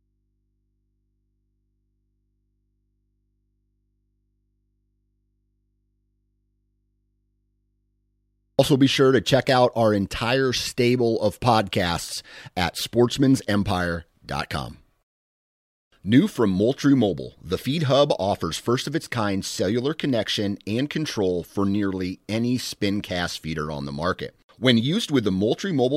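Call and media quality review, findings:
Audio dropout to a faint residue from 0.00 to 8.59 s, already under way at clip start. Speech absent. Only mains hum remains, roughly 50 dB below signal level. Abrupt return at "be sure to check". Likely source lost upstream while the capture path stayed live.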